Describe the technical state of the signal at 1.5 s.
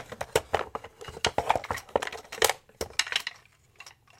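At 1.5 s the audio sits within a run of clock drift buffer slips spanning 0.13 to 3.28 s: a click recurs every 1.05 s, about four in all. The likely cause is two unsynchronised clocks, roughly 300 ppm apart, forcing about 15 samples to drop or repeat at each slip.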